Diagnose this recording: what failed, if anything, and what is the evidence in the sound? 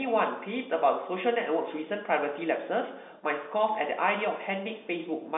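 Nothing in this recording has failed at any stage. What can be heard is a working G.711 telephone coding path, with the speech held to a line band of roughly 200 Hz to 3.6 kHz and nothing above 3.8 kHz.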